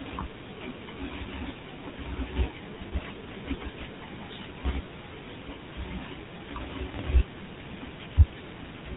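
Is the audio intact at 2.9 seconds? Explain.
No. Lost GSM frames hit from 2.88 to 2.93 s. The decoder repeated the last good frame, giving a brief metallic ring. The 40 ms gap fits two lost frames.

The whole clip also carries plainly audible GSM full-rate codec damage. Pulse-driven vocal-tract modelling makes the speech buzzy and gravelly, with nothing above 4 kHz, which fits the 13 kbps full-rate codec.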